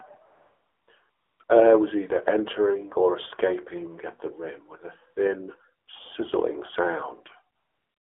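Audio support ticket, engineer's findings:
AMR narrowband mobile codec, whole clip. Band limited to about 300 Hz to 3.4 kHz, buzzy synthetic voicing, plainly audible. The vocal-tract model is starved of pulses, which fits the 7.4 kbps AMR-NB mode. Unlike a plain telephone band-limit, the timbre itself sounds synthetic.

AMR comfort noise at 0.26–0.88 s, 1.10–1.40 s, 1.44–1.48 s, 5.86–5.88 s and 7.56–8.11 s. The background is replaced by smooth, steady noise that switches in and out with speech. The receiver generates it during silence. Unlike a dropout, the gaps are filled, not silent.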